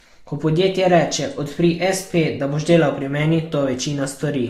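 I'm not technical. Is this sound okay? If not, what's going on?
No. Transcoding between lossy codecs runs through the whole clip, from start to finish. The speech has been squeezed by one audio compression method, then squeezed again by another, and the sound points to a Vorbis file likely being re-encoded as Opus. Each round throws away detail and leaves its own smearing and swishiness, and both sets can be heard at once. Nothing above about 15.9 kHz remains, so the airy top is missing.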